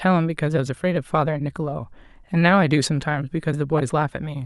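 A speech recording with one corrupt frame decoded, from 3.77 to 3.80 s. For about 24 ms, a handful of compressed frames carrying damaged bits were played back anyway, so misread gains and codes placed energy at the wrong frequencies. It is heard as a brief chirp or burst of noise, peaking around -10 dBFS. On a spectrogram it shows as a narrow vertical smear of misplaced energy, and the waveform shows a short, jagged spike.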